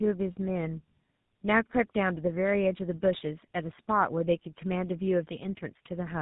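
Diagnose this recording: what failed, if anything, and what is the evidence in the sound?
The failure is at the codec stage: tandem speech coding throughout the speech. Two low-rate speech coders appear to run back to back, which fits a G.729A leg passed through G.711 and recoded as GSM full rate. The second coder models an already degraded signal, so the roughness, muffling and warble compound. Nothing sounds above 3.8 kHz. A single codec or a plain band-limit would be narrowband but cleaner. This stacked artefact texture points to tandeming.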